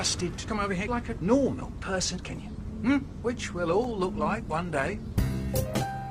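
From 3.55 s to 6.01 s the sound turns rough and dulled, a call bitrate drop consistent with the encoder falling from about 48 to 15 kbps.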